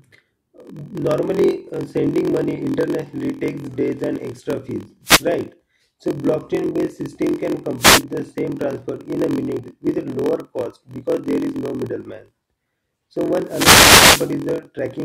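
From start to finish the speech carries a block size mismatch (padded): each block that fits a 1024-sample read is only partly filled, and zeros complete it. That gives a steady 43.1 Hz buzz and slows delivery to 0.938 times normal at unchanged timbre. The waveform shows regular flat gaps, and the spectrogram shows thin vertical stripes.

At 5.04 to 5.25 s, at 7.78 to 8.03 s just after "blockchain based system can", and at 13.46 to 14.33 s, a wireless microphone noise hit occurs. The FM radio link fades, receiver noise swells, and a swish of static is heard over the speech. Each hit shows as a broadband haze on the spectrogram.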